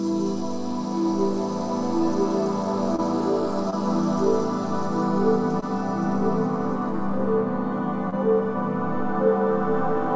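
Short concealed packet loss occurs four times, at 2.96, 3.70, 5.60 and 8.10 s. Each time about 20 ms of audio arrived too late to decode, and the receiver extended the preceding sound to cover the gap before blending back. Each is heard as a brief smear or wobble. On a spectrogram, each appears as a thin vertical band where the spectral detail goes smooth or repeats, below the call path's 8 kHz ceiling. The waveform shows a short, overly regular stretch.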